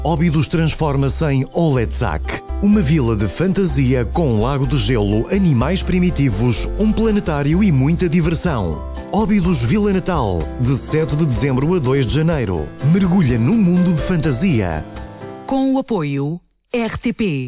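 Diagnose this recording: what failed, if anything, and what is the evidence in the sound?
Nothing failed; no faults heard.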